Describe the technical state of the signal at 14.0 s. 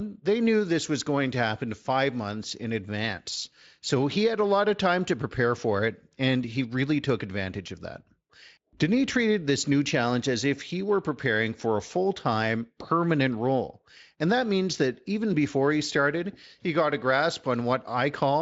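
At 14.0 s the speech is intact, with no dropout, distortion or other fault at that moment.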